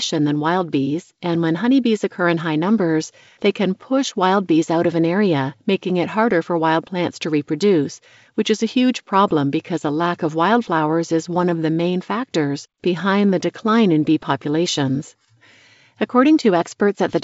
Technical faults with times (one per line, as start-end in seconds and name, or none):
none